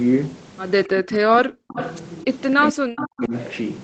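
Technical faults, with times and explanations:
0.87–1.79 s and 2.54–3.33 s, speech suppressed in double talk: In both stretches the speech sinks, falling by roughly 40 dB at its lowest and losing something like 0.7 s of audio each time. The likely cause is both ends talking at once. The echo canceller couldn't tell the near talker from loudspeaker echo, so it pulled everything down together.
1.77–1.98 s and 3.02–3.06 s, echo leak: Faint copies of the voice show up, trailing by 270 ms and sitting about 15 dB under the main speech. The first is a short scrap of about a fifth of a second just as the first dip ends. The second is a tiny blip inside the second dip. This is likely a loudspeaker on one side whose echo canceller let some residue slip back into the call, which travels over the 8 kHz-limited Opus path.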